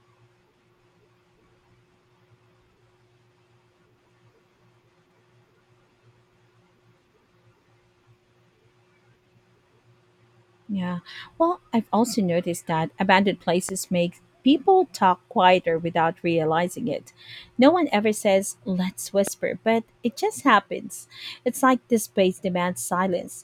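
At 13.69 to 13.71 s and again at 19.27 to 19.30 s, a loud pop jumps out of the speech, the second clearly stronger than the first. Each is a single sharp thump, likely from a voltage spike such as a switch or static discharge, and the speech continues unbroken beneath it, unlike a dropout's gap.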